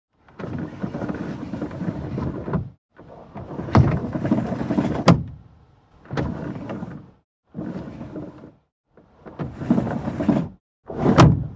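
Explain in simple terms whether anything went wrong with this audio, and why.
Nothing went wrong here.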